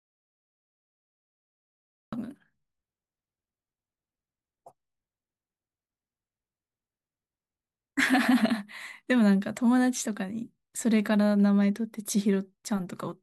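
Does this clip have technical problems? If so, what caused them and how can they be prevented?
Yes: an audio dropout to silence runs from the start to 2.13 s, silent with no room tone, likely from a lost input or mute. Secure connections and monitor input levels before recording.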